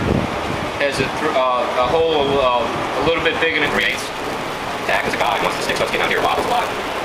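From about 3.65 s through to the end, there's a block size mismatch (truncated) going on. One stage is handing over longer blocks than the next one reads, so the tail of every block just gets dropped. You hear it as a buzz at about 172 Hz, which fits a 256-sample read size, and the sound suddenly races along roughly 1.88 times faster while the pitch stays about where it was.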